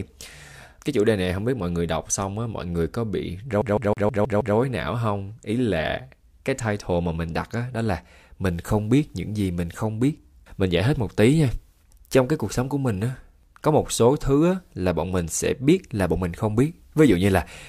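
A speech clip with a CD stuck on one turn from 3.62 to 4.57 s, just after "mọi người có bị" and before "não không ý". The same 0.16 s slice plays six times in a row, each repeat cut by a brief mute where the laser jumps back one track at a scratch. The loop length stays identical and the repeats are evenly spaced. That steady mechanical stutter separates it from a network or buffer stall, which freezes or repeats irregularly.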